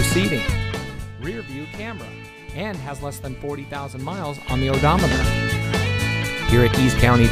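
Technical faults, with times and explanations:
0.46–1.16 s, zipper noise: the level drops about 15 dB in 2 dB steps, around fifteen a second, and each unsmoothed jump leaves a small click, giving an audible ticking.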